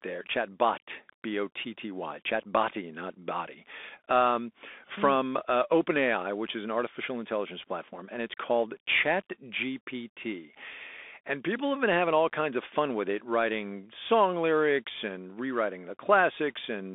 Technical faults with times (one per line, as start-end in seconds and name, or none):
0.00-16.95 Bluetooth CVSD headset codec